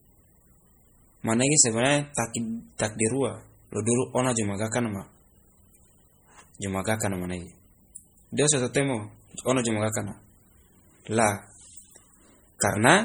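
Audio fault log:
Throughout: MP3 compression. The speech has a heavy watery, swirling quality, and the s sounds turn metallic and chirpy. Consonant onsets smear. Nothing sits above 21 kHz. The likely cause is an MP3 encoder starved of bits, which fits a rate around 32 kbps. The encoder splits the sound into narrow frequency lines and drops the weak ones. Those lines flicker on and off from frame to frame, which produces the swirl.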